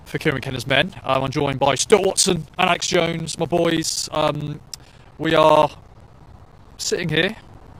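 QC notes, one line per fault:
0.05–7.74 s: periodic USB or driver dropouts. Steady ticks every 64 ms, each a silent gap of around 10 ms where a stalled driver loses audio.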